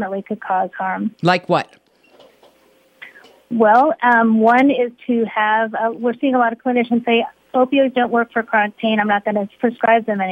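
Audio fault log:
6.76–10.31 s, sudden gain jump: at 6.76 s the whole signal steps up by about 4 dB from one sample to the next and stays at that higher level to the end of the clip. The sound and its background noise rise together, so the noise floor lifts at the same instant. The likely cause is a digital gain change applied at once, with no ramp to ease the level from the old setting to the new one.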